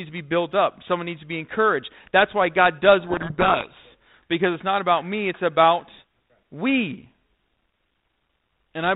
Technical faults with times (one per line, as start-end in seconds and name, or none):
3.00-3.86 codec payload misread